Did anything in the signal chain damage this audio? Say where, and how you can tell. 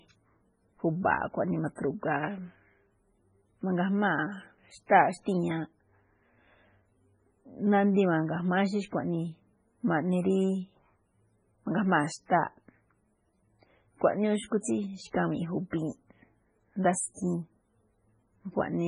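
Yes, and the damage happened at the codec stage. The whole speech clip has the watery, swirly texture of heavy MP3 compression, and nothing survives above about 10.5 kHz. That hard ceiling is the encoder dropping the treble outright when it runs short of bits. Weak frequency lines also flicker in and out from frame to frame. The overall degradation fits a very low bitrate, around 16 kbps, as the likely cause.

You can also hear pre-echo at 1.76, 14.61, 15.71 and 17.14 s. Before each sharp attack there's a hiss lasting about 23 to 35 ms, and the onset itself sounds softened. The codec spreads its quantisation noise across a whole transform block. When a loud attack sits late in that block, noise sized for the loud part leaks into the quiet gap just before it.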